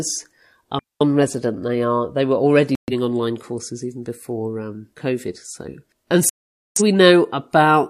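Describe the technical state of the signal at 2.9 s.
At 2.9 s the signal is inside a digital broadcast dropout running from 2.75 to 2.93 s, between "are they were already" and "online courses even before". The receiver stopped getting decodable frames and muted its output, so the speech drops to silence and resumes mid-programme. The missing stretch fits about three lost frames. Unlike packet-loss concealment, nothing is smeared or repeated to fill the gap. The hole is clean silence, and that part of the speech is gone.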